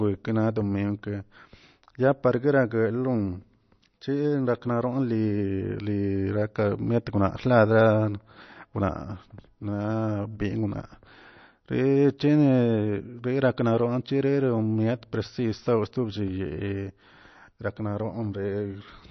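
Throughout the whole recording the speech carries plainly audible codec damage, most likely MP3 compression at a low bitrate, with the sound pointing to something around 32 kbps. Nothing survives above 6.1 kHz, so sibilants lose their edge and turn dull, while weak detail flickers in and out, giving a watery, swirling texture. On a spectrogram this shows as a hard ceiling at 6.1 kHz, with isolated blocks of energy blinking on and off below it.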